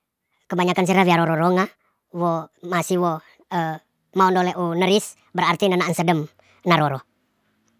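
From the first second to the last, the whole clip runs too fast and too high. This is a wrong sample rate fault. The speech plays about 1.45 times faster than normal, and its pitch rises by about 6.45 semitones. Speed and pitch shift together, by the same ratio. That pattern fits audio captured at 22 kHz but played back at 32 kHz, with no rate conversion. Voices sound squeaky and rushed throughout.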